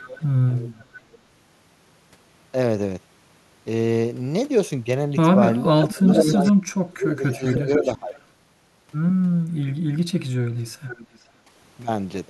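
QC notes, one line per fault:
0.00–0.24 s, 0.79–1.18 s, 5.80–6.52 s, 7.31–8.19 s, 10.87–11.19 s: echo leak. A delayed copy of the speech returns about 0.48 to 0.51 s late, from roughly as loud as the talker around 6 s down to far fainter near 1 s. The likely cause is far-end loudspeaker pickup that the echo canceller failed to remove.
5.65–8.16 s: speech suppressed in double talk. While the echo overlaps the talker, the near speech dips in pieces totalling about one and a half seconds, at worst around 25 dB down. This is likely the canceller attenuating everything because it cannot separate talker from echo.
11.39–11.50 s: background gated by the echo canceller. The room sound briefly drops by about 7 dB for roughly a tenth of a second, then recovers. The canceller clamped the microphone while the loudspeaker was active, pulling the ambience down with it.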